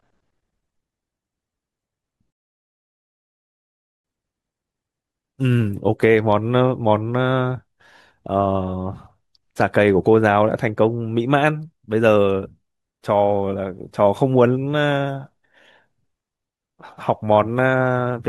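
At 2.32 s there's a rebuffering stall: the player runs dry, goes silent until 4.05 s, then picks the speech up exactly where it stopped, adding 1.72 s.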